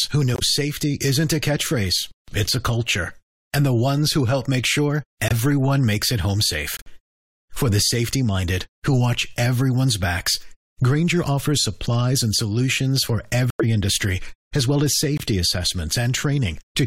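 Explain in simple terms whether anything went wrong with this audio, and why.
Yes, there are five short silent gaps in the speech: at 0.34, 5.28, 6.77, 13.50 and 15.17 seconds. Each lasts about 0.04 to 0.14 seconds. This is corrupt frame muted. Damaged chunks of the compressed audio were rejected, so the player put silence in their place. The timing stays intact.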